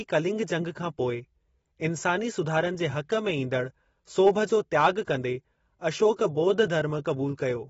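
AAC compression damage runs through the whole of this speech clip. Nothing is present above about 7.6 kHz, so the sound is dulled and sibilants lose their edge, with a smeared, warbling texture on sustained sounds. The likely cause is AAC-LC encoding at a low bitrate, which fits something near 24 kbps: the encoder lowers its cut-off and quantises the remaining bands coarsely, leaving audible gaps and fizz.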